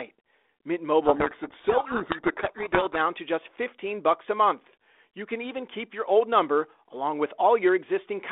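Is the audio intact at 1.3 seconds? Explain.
No. At 1.3 seconds you're in the middle of a codec payload misread, running from about 1.04 to 2.97 s. The G.726 code words arrive with their bit order flipped, so the decoder reads nonsense differences and the speech gets buried under harsh distortion until the ordering lines up again.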